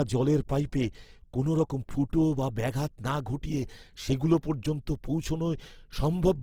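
Speech runs for the full clip with plainly audible Opus compression damage from start to finish. Voiced sounds come across rough and grainy, with a noisy texture where tonal detail should be. This is likely an encoder in its music (CELT) mode at a low rate, which fits about 16 kbps. There, bands starved of bits are filled by folding or noise rather than left empty. Bandwidth stays fullband, reaching roughly 20.2 kHz.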